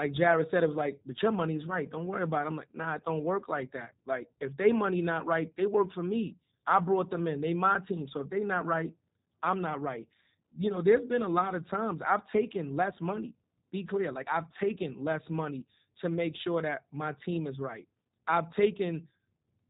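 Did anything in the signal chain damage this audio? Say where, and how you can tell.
Yes: G.729 codec damage at the codec stage, throughout the speech. Nothing passes above about 3.8 kHz, and the voice sounds rough and synthetic. The model rebuilds speech from a vocal tract filter, a pitch predictor and sparse pulses, which fits an 8 kbit/s coder.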